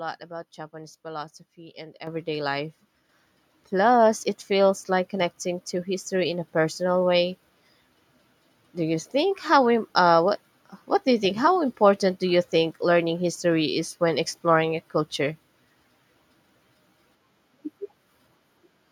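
The call software judged the microphone too quiet and raised the device's input volume twice, each time in a single step, so this is a microphone volume stepped up fault. At 2.07 s, just after "philosophy and", the level jumps by about 8 dB. At 3.09 s it rises again by about 4 dB. Both times the speech and the background noise get louder together, abruptly.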